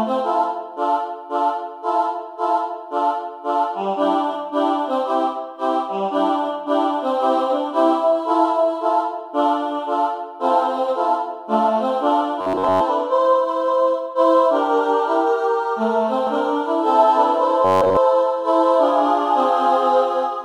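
From 12.41 to 12.81 s the sound becomes a rigid metallic buzz at 93.8 Hz, robotic sound from repeated short buffers. This is likely a playback stall in which the last short block, about 10.7 ms, was looped while most of the new audio was dropped.

At 16.27 s a doubled audio track starts abruptly and runs to the end. A full-band copy trails by roughly a fifth of a second, about 5 dB quieter, with no reverberant colour, likely a second capture path mixed in. The same 93.8 Hz buzz recurs from 17.65 to 17.97 s.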